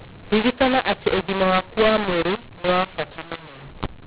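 From start to end, the speech carries a mu-law and A-law mixed up fault: samples encoded as A-law are decoded as mu-law, so each 8-bit code lands on the wrong level. Loud and soft passages come out distorted in an uneven way, giving a harsh, gritty edge, and the gaps between phrases fill with hiss. Clipping would flatten only the peaks, but here the quiet parts are damaged too. The 8 kHz G.711 band limit, with nothing above 4 kHz, sounds intact.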